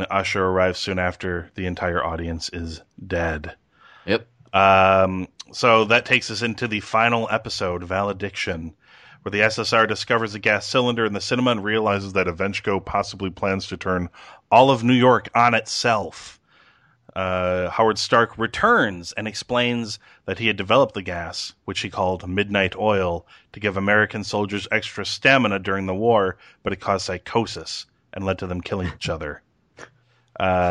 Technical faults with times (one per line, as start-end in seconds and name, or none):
11.88-14.29 drift correction step
18.48-19.85 drift correction step